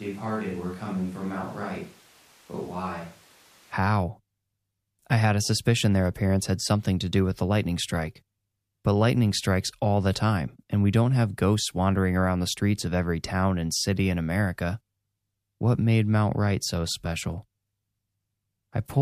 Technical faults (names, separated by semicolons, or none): switch to a distant microphone